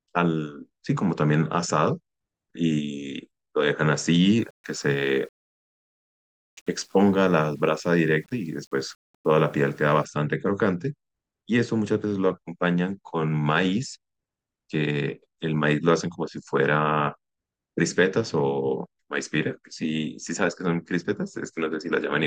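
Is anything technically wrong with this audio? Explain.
Yes. From about 4.39 to 10.05 s the speech turns grainy, a rough distortion that tracks the level and sits roughly 40 dB down. That points to low bit depth without dither, likely around 9 bits with plain rounding, so the error follows the signal and quiet passages get gritty.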